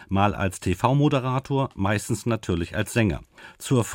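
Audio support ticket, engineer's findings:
No faults found in this speech clip. No working path to comment on beyond the audio itself.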